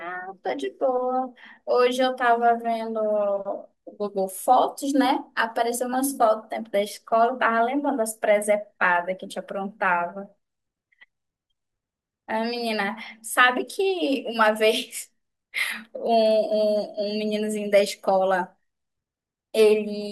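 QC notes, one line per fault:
Nothing to flag here; the speech came through without a single problem catching my ear.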